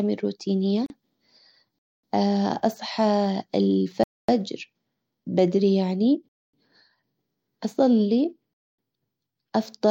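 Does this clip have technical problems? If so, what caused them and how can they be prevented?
Yes. A gap at a join of encoded pieces opens at 0.86–0.90 s, a single 37 ms silence in the speech. It comes from encoder start delay and final-frame padding left in at a splice, and its edges are smeared rather than razor-sharp. Trimming the encoder delay and padding before joining, or using gapless metadata, prevents it.

Gaps between chunks appear as 250 ms holes at 1.79, 4.04, 6.29 and 8.54 s. They recur after every 2-second chunk, and each one is longer and more regular than the splice gap. Buffering and scheduling chunks back-to-back so playback never waits between them prevents this.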